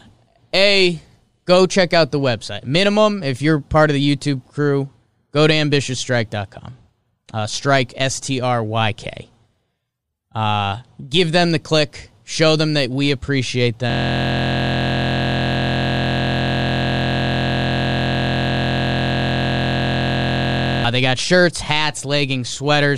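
At 13.9 s the speech cuts out and turns into a flat, steady buzz that runs until about 20.85 s. That's a system hang loop. The computer or its audio driver stalled, and the sound hardware kept replaying whatever was left in its ring buffer. The repeated slice is only 23.22 ms long, which fits a 1024-sample buffer. It cycles around 300 times, so it fuses into a tone at about 43.1 Hz instead of a stutter.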